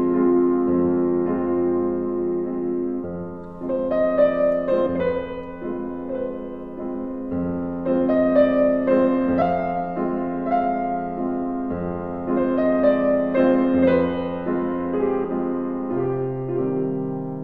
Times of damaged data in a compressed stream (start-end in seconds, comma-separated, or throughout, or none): 4.85, 9.41, 15.21-15.25